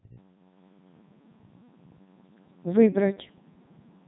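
Speech passed through a Codec 2 vocoder for its whole length, and the heavy damage fits the codec's top 3.2 kbit/s rate. Only pitch, voicing, energy and a spectral envelope survive, rebuilt from sine waves, so the voice sounds robotic and buzzy, with nothing above 3.8 kHz.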